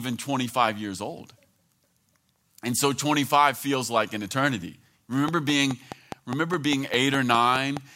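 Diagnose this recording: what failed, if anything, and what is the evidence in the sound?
After "feels like an eternity", a train of clicks, 4.8 per second, runs 5.28–7.78 s as evenly spaced vertical spikes, likely interference in analogue wiring.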